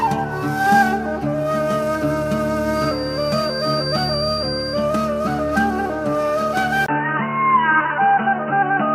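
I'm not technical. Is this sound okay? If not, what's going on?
No. A feedback whistle runs from 2.68 to 4.88 s: a thin, steady high tone near 4.7 kHz sits a little below the sound, swelling and fading slowly. It's likely a loudspeaker feeding back into the microphone, hovering just short of a full squeal.

At 6.86 s the input switched to a poorer device, likely a different microphone or a headset in call mode. There's a 20 ms silence at the switch, then the sound turns dull and boxy until the end, with nothing above 3 kHz. Loudness stays about the same, with very faint new background noise.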